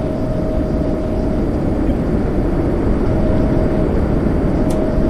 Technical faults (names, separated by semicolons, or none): MP3 compression; corrupt frame decoded